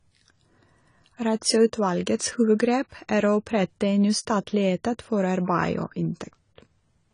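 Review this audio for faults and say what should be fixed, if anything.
Throughout the clip the speech sounds dull and smeared, with nothing above 10 kHz and a fizzy, warbly edge on sibilants. That's likely AAC compression, with the low-bitrate AAC-LC encoder thinning the spectrum in a way that fits roughly 24 kbps. To avoid it, encode at a higher bitrate or keep a lossless master.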